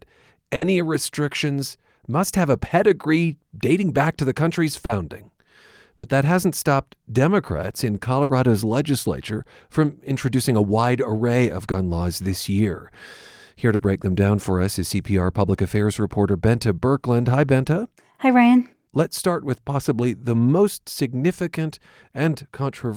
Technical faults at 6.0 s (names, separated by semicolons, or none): burst of packet loss